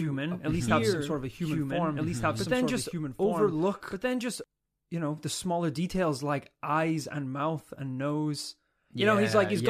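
From the very start until 4.44 s, the speech plays over a doubled audio track: a second copy of the same speech, at roughly equal level, trailing by about one and a half seconds. This is likely a second capture through a slower path, or an edit holding two copies out of step. Unlike an echo or reverb, the copy is full-band, has no decay or room colour, and cuts off abruptly at 4.44 s.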